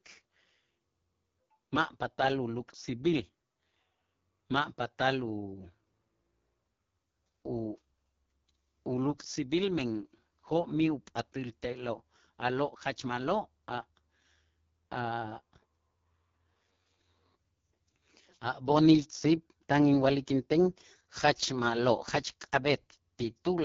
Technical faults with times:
0.00-23.64 AMR wideband (HD Voice) codec

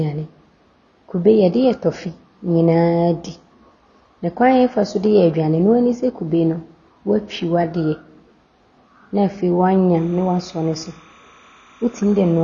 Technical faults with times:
0.00-12.44 AAC compression
9.96-12.44 timecode bleed

